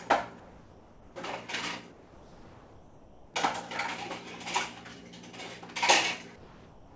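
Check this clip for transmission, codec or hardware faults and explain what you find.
Three quiet stretches have comfort noise in place of the background: 0.40 to 1.16 s, 1.92 to 3.34 s, and 6.36 s to the end. The real background, about 22 dB below the loud parts, turns into steady, featureless hiss about 4 dB quieter, likely because discontinuous transmission paused sending and the receiver synthesized noise. A spectrogram shows smooth, uniform texture there, cut off at 8 kHz like the rest, which fits a G.722 call path.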